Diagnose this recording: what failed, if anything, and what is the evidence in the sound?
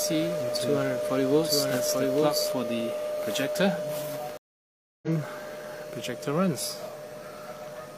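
A doubled audio track, likely a second, slower capture path, runs from the start to 2.52 s: a dry copy about a second late, roughly 5 dB down, ending abruptly.

A stream reconnect at the network stage: silence from 4.37 s for 0.65 s, then a fresh decoder resumes the sound roughly 0.7 s further on.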